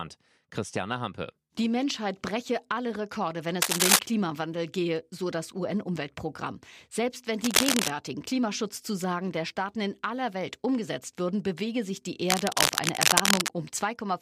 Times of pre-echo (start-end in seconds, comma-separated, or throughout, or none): none